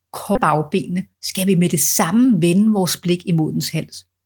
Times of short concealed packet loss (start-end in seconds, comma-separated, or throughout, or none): none